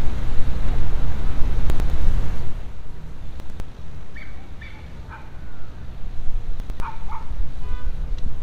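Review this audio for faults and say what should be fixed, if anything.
Three brief jumbled moments occur at 1.7 to 1.9 s, 3.4 to 3.6 s and 6.6 to 6.8 s. This is chunks out of order. In each spot a 100 ms chunk arrived or was written one chunk late, so it plays after the chunk that should follow it. Nothing is missing, but the swapped order creates three hard joins per event. To prevent it, reorder incoming chunks by sequence number or timestamp in a jitter buffer before writing or playback.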